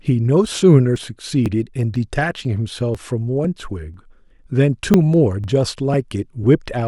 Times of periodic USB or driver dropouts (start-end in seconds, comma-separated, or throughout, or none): 0.47-6.44